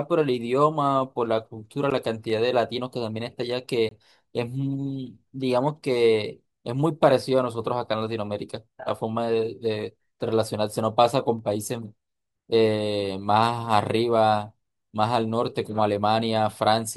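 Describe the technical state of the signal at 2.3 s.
Dropped samples at 2.30 s: the likely cause is a tiny piece of the stream, a fraction of a millisecond, going missing, so the waveform leaps straight from one value to a later one instead of moving smoothly between them. That gap is far too short to take any of the speech away. What it leaves is a single sharp click, which appears as a thin vertical line running up through the spectrum at that instant.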